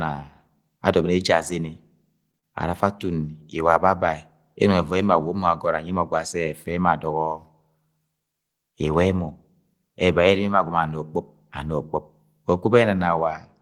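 Speech clip, and right around 2.3 seconds there are two hiccups back to back. First, a short stall from a late packet at 2.31 to 2.37 s: the jitter buffer ran dry, so the receiver held the last sound for about 23 ms until the packet showed up, then carried on from the same spot. Nothing's lost, but that sound drags a touch, with a faint buzz or dip, and everything after sits 23 ms later. Then straight after, at 2.38 to 2.45 s, there's a short concealed packet loss: about 40 ms of audio never made it to the decoder, and the receiver papered over it with roughly 44 ms of synthesized continuation of the preceding sound before blending back into the real signal. You hear it as a quick smear or wobble, and any brief consonant in that gap can simply vanish.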